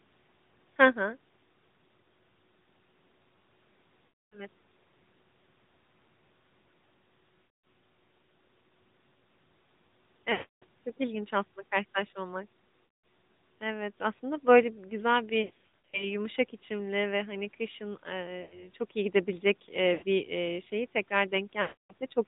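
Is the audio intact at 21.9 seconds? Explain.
No. At 21.9 seconds the audio sits inside a run of lost AMR speech frames from 21.62 to 21.93 s, about 280 ms. The decoder keeps repeating the last good pitch and vocal-tract settings at falling gain, so the sound is drawn out and fades to silence. A plain dropout would cut off abruptly instead.

The AMR narrowband mobile codec is also present there, as it is across the whole clip. Nothing above 4 kHz survives, and the speech has a buzzy, synthetic edge, which fits a rate around 10.2 kbps. Unlike plain low-pass filtering, this codec also makes the voice itself sound artificial.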